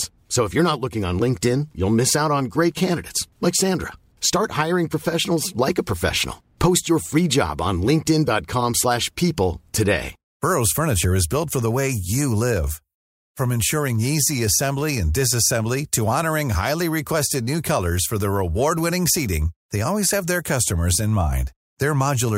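No technical faults occur at any point in the speech, so there is nothing to place in time order.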